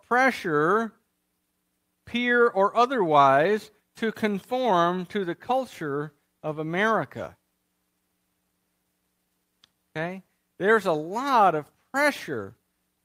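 No technical faults can be heard anywhere in the speech recording, and the signal stays steady throughout.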